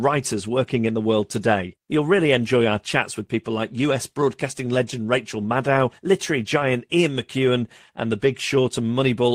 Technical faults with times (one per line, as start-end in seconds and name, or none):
none